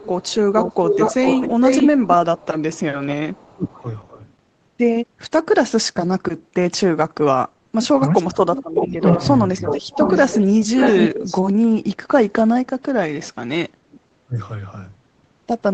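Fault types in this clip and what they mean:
Echo leak: a delayed copy of the speech trails it by 0.44 s, then 0.59 s, near full level early, fading later, likely residual loudspeaker echo.
Speech suppressed in double talk: the speech drops by up to about 20 to 35 dB in short pieces during overlap, likely the echo canceller attenuating both the talker and the loudspeaker echo.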